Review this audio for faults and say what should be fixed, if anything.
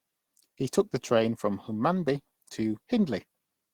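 No faults found; nothing needs fixing.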